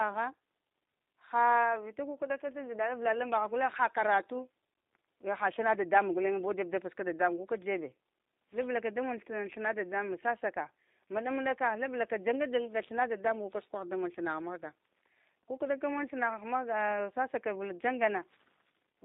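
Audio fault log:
throughout G.729 codec: a low-rate speech coder, likely around 8 kbit/s, rebuilds the speech from a vocal tract model and sparse pulses, cutting everything above 4 kHz and leaving speech dull, rough and noticeably synthetic.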